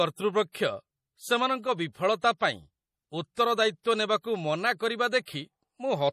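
From start to finish the speech sounds watery and swirly, with a metallic chirp on s sounds and consonant onsets that smear rather than snap. Nothing is heard above 15 kHz. This is MP3 compression, likely at a low rate, around 40 kbps. Short of bits, the encoder has cut the treble at a fixed point and dropped weak frequency lines that flicker in and out between frames, producing that shifting, underwater texture.

At 0.52 s, and again at 3.35 s, a brief hiss creeps in just ahead of a sharp onset, lasting about 26 ms the first time and 24 ms the second, and each attack lands soft and blurred. This is pre-echo. The attack fell late in a coded block, so quantisation noise scaled for the loud part was spread evenly across the whole block, including the near-silence before the onset.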